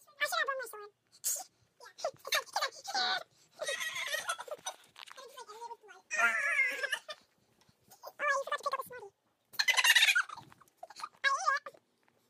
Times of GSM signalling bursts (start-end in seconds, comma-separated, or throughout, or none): none